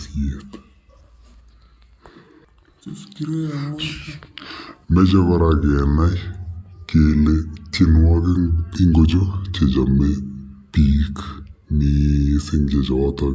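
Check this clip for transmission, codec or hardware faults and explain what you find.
One fault runs through the whole clip: a wrong sample rate. The audio was played back without conversion at a slower rate than it was captured, consistent with 22 kHz material run at 16 kHz. Everything plays at 0.726 times normal speed and sits 5.55 semitones low, so the speech sounds sluggish and deep.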